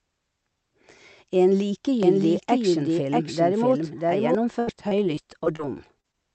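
From 2.03 s to 4.35 s a second, equally loud copy of the speech runs about 0.7 s behind the first, so every phrase is heard again as a dry, full-band echo with no room decay. It cuts in and drops out abruptly at both ends. This is a doubled audio track, likely from the same signal being captured twice through paths with different delays, or two out-of-step copies left together in an edit.

Between 4.59 s and 5.61 s the speech turns choppy and robotic, with bits of sound going missing. This is repeated packet loss: seven separate holes, the longest about 76 ms, together filling roughly a fifth of that second. The receiver patched each one by stretching the last received sound, and another hole arrived before the audio could settle.

Near the end come two short concealed packet losses, heard as brief smears or wobbles in the speech. The first runs from 6.01 s to 6.06 s and the second from 6.12 s to 6.15 s. 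In each case the decoder lost a few hundredths of a second of audio and filled the gap by continuing the preceding sound before blending back in. These two patches sit within the call's Opus coding, which limits the audio band to 8 kHz.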